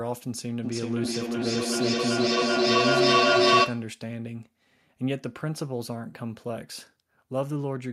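From 0.63 s to 3.96 s the speech is caught in a feedback echo between two devices. Two endpoints sharing a room keep replaying each other's microphone feed, and neither echo canceller can remove sound played by the other device. Each fragment returns roughly every 400 ms, thinner and more metallic each pass. Unlike a single-device acoustic echo, which fades, these repeats pile up, peaking at about 9 dB above the speech itself.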